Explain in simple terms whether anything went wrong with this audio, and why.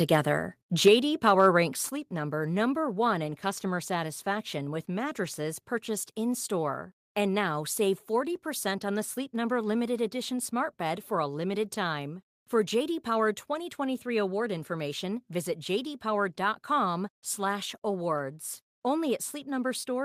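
Around 0.86 to 0.88 s the loudest sound gets a harsh, crackly edge; that's microphone overload, likely from the input being set so high the peaks got chopped off. Right after, at 0.88 s and again at 1.89 s, everything suddenly gets quieter in two steps: microphone volume stepped down, likely the call software turning the mic down after that distorted peak.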